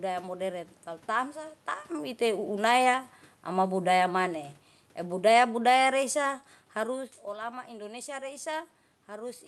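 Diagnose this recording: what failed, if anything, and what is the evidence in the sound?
Twice the speech sinks by about 3 dB, with the room noise dropping along with it: from 2.21 to 4.36 s after "moderen kalu tamsa taem", and from 5.12 to 7.04 s before "olama indonesia". This is automatic gain falling in call processing, where the AGC judged the input too loud or its background noise too strong and eased its gain down.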